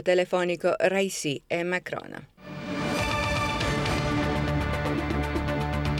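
No fault can be heard anywhere in the clip.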